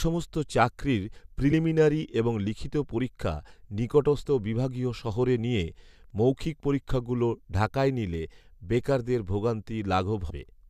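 At 1.51 s the speech jumps forward slightly. Compressed frames are skipped here, about one frame of audio missing. The decoder never plays it, so the sound leaps ahead. At 4.25 s the same thing happens, again about one frame. At 10.30 s the gap is larger, roughly four frames, close to 100 ms lost. Each frame is 24 ms long.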